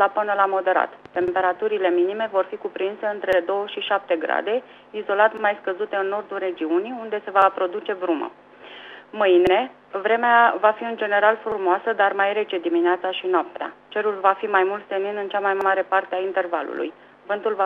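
Overlapping chunks cause a brief stutter at 1.28, 3.33, 5.37, 7.42, 9.47, 11.52, 13.57 and 15.61 s. Each 2.0 s chunk begins about 48 ms before the previous one finishes. That 48 ms of sound plays twice. The result is a regular click.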